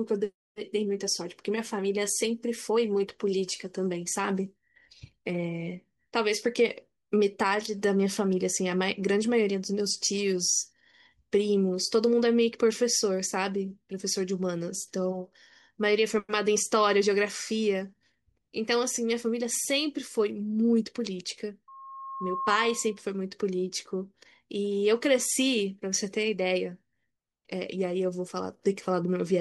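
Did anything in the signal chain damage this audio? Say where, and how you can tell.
Yes. From 21.68 s to 23.02 s a steady tone near 1.1 kHz rises out of the speech, swelling over roughly the first 0.7 s until it sits a few decibels above the talker. This is loudspeaker feedback squeal, arising in the analogue acoustic loop where the microphone hears the loudspeaker it drives. At 1.1 kHz the loop gain passed unity, so that frequency fed on itself and grew until it ended about 1.3 s after it began.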